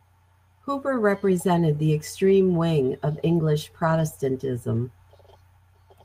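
Packets went missing three times in the speech, and each time the following packet's low-bitrate backup copy stood in: a lost packet rebuilt from error correction. At 2.25 to 2.35 s, 60 ms was rebuilt, consistent with three 20 ms packets; at 3.83 to 4.01 s, 100 ms, consistent with five; at 4.75 to 4.77 s, 20 ms, a single packet. No gap is heard, but those stretches turn briefly rougher and noisier.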